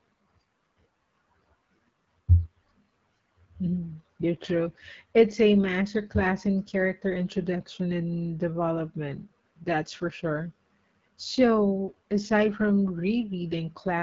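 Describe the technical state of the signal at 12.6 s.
AMR wideband (HD Voice) codec damage is present at 12.6 s, as it is across the whole clip. The codec rebuilds speech from a pulse-excited vocal tract model up to 6.4 kHz and fills the band above with shaped noise, and nothing reaches past about 7.5 kHz. Here the coding artefacts are plainly audible: the speech sounds rough and raspy, which points to one of the lowest rates, around 8.85 kbit/s.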